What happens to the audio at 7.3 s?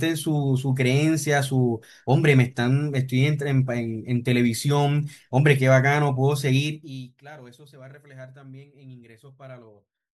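Nothing goes wrong at 7.3 s: the speech carries on intact, with no dropout, distortion or abrupt jump in level at that point.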